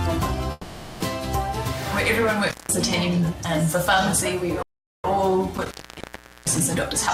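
At 0.51 s the sound freezes into a call audio freeze. The last sound is carried on as a fading buzz or hiss until 1.02 s, filling about 490 ms. This likely comes from packets held up in transit, leaving the jitter buffer empty. The receiver stretches what it last had rather than going quiet. When the packets arrive, the sound resumes exactly where it stopped. Nothing is lost, but everything after runs about 490 ms later.

From 2.48 s to 2.72 s there is an intermittent contact. A loose plug or cable opens the line for 178 ms. The sound drops out abruptly, with crackle at both edges. Only faint hiss remains in the gap. A second, longer one runs from 5.55 s to 6.60 s. Here the line stays open for 760 ms, again framed by crackle, with just hiss underneath.

At 4.62 s a playback stall cuts the sound off in mid-flow. The output stays silent until 5.04 s, about 414 ms. The player likely ran out of data or was blocked for that stretch. 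Unlike the freeze, this gap is plain silence, with no buzz filling it. Output returns once the player recovers.

From 6.74 s to 7.11 s a jitter buffer speed-up hurries the sound. It plays at about 127% speed while the pitch stays the same. The buffer was holding more audio than it wanted. To catch up, the receiver cut many short pieces, each a pitch period or a few long. Roughly a tenth of a second is removed in all.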